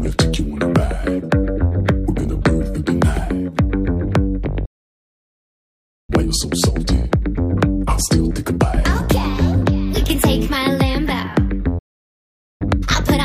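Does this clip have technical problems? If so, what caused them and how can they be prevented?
Yes. The audio drops out mid-flow twice, falling silent from 4.65 to 6.10 s (about 1.4 s) and again from 11.78 to 12.62 s (about 0.8 s), then resuming. This is a playback stall, likely caused by the player running out of buffered data or having its audio thread blocked, so nothing reached the output until it recovered. A larger playback buffer and giving the audio thread priority over other work would prevent it.

Straight after each gap the audio sounds hurried but keeps its normal pitch. It runs at 1.15 times speed from 6.10 to 9.10 s, and at 1.5 times speed from 12.62 s to the end. This is time-compressed catch-up. The player shortens the backlog left by the stall by cutting out small pieces and cross-fading across the joins. Preventing the stalls removes the need for it, and a gentler catch-up rate makes any that remain less noticeable.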